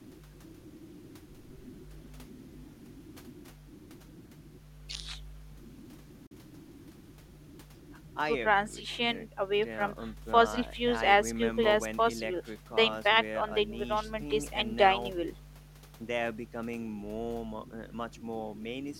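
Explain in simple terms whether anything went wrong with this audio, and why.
A Bluetooth dropout cuts the speech between 6.27 and 6.32 s. For about 50 ms the sound stops, then the speech picks up again a little further along, as if it had kept playing during the silence. The likely cause is a short break in the wireless link: some audio never reached the headphones in time, so they had nothing to play. The roughly 41 ms of missing audio fits two lost packets.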